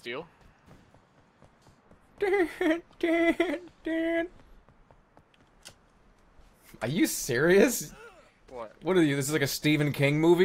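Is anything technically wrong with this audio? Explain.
No, nothing technically wrong can be heard in this audio. There is no point in it where a fault shows up.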